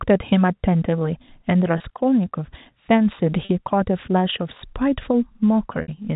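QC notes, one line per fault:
1.78 s, 3.45 s, 5.82 s: packet loss with pitch repetition, a brief buzzy held tone (20, 40, 60 ms) as the last pitch period repeats over missing packets, the 60 ms gap fading into silence before speech cross-fades back.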